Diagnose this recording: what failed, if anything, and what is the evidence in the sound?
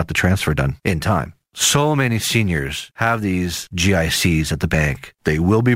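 The converter failed: sample clock jitter from 0.45 s to 5.76 s. An unsteady clock, wandering by a few microseconds, times samples early or late, so the error follows waveform slope. A hiss roughly 25 dB down rises on loud, bright speech and vanishes in pauses, unlike a steady noise floor.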